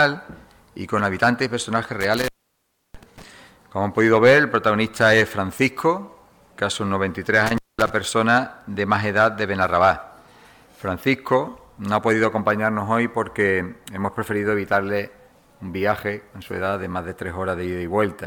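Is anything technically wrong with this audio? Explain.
Yes. The audio has an intermittent contact fault, heard twice. Between 2.01 and 3.22 s the sound drops out for about 0.67 s. Between 7.46 and 7.90 s it drops out again for about 0.21 s. A loose plug or cable briefly loses its connection, so the signal path opens. Each dropout has crackle at its edges as the contact breaks and remakes. Faint hiss remains while the line is open.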